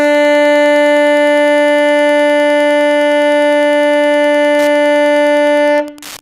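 A steady, faint ticking runs under this music from start to finish, about ten clicks a second, repeating every 102.4 ms and sitting roughly 30 dB below the music. That regular beat is Wi-Fi interference: a nearby Wi-Fi radio transmits a beacon at that fixed interval, and a stage in the audio chain picks up the radio bursts and rectifies them into audible pulses that ride on top of the recording.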